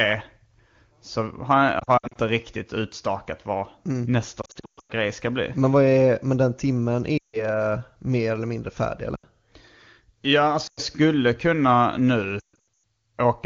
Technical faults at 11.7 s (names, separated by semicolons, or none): none